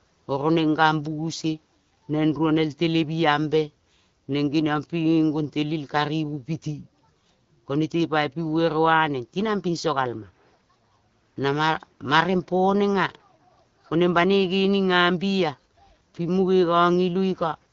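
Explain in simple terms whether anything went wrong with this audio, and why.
Nothing went wrong here; this speech has no faults.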